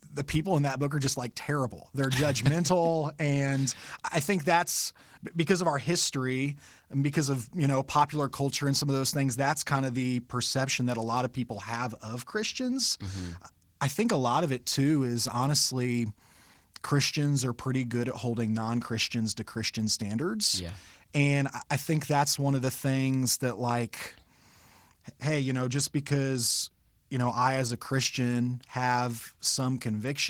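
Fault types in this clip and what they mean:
Opus voice compression: the speech was coded by Opus in hybrid mode, with linear prediction below 8 kHz and a transform layer above. The rate fits roughly 16 kbps, so coarse excitation coding leaves the voice plainly hoarse and slightly robotic, though still fullband.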